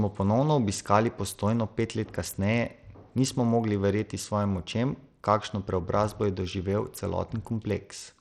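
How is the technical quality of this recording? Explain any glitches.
The quality is plainly compromised. Throughout the speech there is audible coding damage, most likely Bluetooth SBC compression starved of bits, which fits a low rate of around 80 kbps. The coarse sub-band coder drops or flickers the treble and lays gritty noise and aliasing over the sound. The unsteady top end and grain separate it from a clean low-pass filter.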